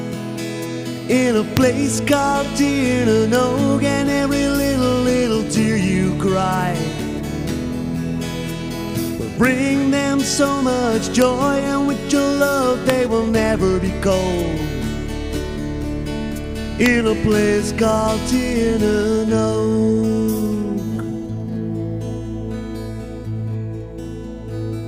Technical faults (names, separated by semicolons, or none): integer overflow